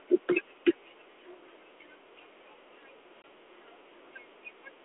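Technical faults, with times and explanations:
3.22 to 3.24 s, packet loss on an ADPCM call: a hard-edged 20 ms gap of silence, about one packet, breaks the 32 kbit/s G.726 stream. The decoder's adaptive predictor and step size drift from the sender's, so the speech resumes slightly distorted before settling.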